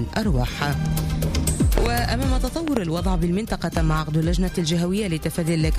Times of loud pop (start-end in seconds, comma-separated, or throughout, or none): 1.78-1.88, 2.68-2.79, 3.77-3.79